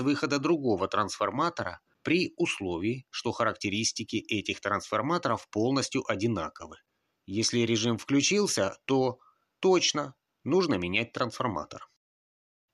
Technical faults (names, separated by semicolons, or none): none